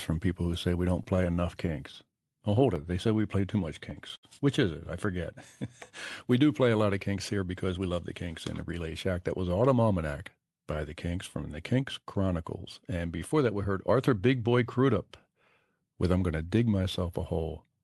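From 1.03 to 3.11 s, just after "who say we don't", there are scattered short gaps. About ten lost or late packets, none longer than roughly 15 ms, were patched by extending the preceding sound, filling around 150 ms in total. They are heard as ticks and smears. On a waveform they show as brief repeated cycles, and on a spectrogram as thin smudged vertical seams.

From 3.15 to 3.61 s, a jitter buffer slow-down stretches the audio to 93% speed, adding 40 ms. The receiver repeated single pitch periods to rebuild its reserve, so the sound drags without any drop in pitch. The spectrogram shows harmonics staying level while sounds lengthen, and the waveform shows cloned periodic cycles.

At 4.16–4.26 s, a short stall from a late packet holds one sound for 71 ms while the buffer runs empty. Nothing is lost, but the delay grows by 71 ms. It sounds like a sound briefly held too long. On the spectrogram the frequency content stops changing for that moment.

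From 7.07 to 8.14 s, between "play a lot of" and "kinks in the", a jitter buffer speed-up runs the audio at 111% speed. Roughly 150 ms of pitch periods are removed to shrink the backlog, so this part sounds hurried at unchanged pitch. On the spectrogram, syllables look compressed in time, and throughout the clip the energy ends near 12 kHz, consistent with the Opus call path.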